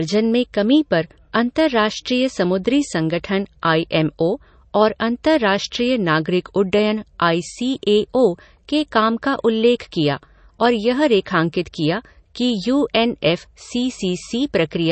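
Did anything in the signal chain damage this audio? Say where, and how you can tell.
Yes, codec stage: likely low-bitrate audio saved at a high bitrate. Nothing rises above 8.3 kHz at any point, and re-encoding cannot restore the lost top.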